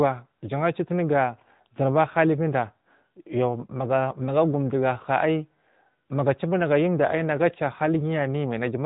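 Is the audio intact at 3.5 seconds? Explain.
No. At 3.5 seconds, as throughout the clip, the speech has passed through the AMR narrowband mobile codec, which samples at 8 kHz and rebuilds the voice from a vocal-tract model excited by a few pulses per subframe. Nothing above 3.8 kHz survives, so the speech sounds muffled and phone-like, and the plainly audible buzzy, synthetic edge fits an upper mode of around 10.2 kbps.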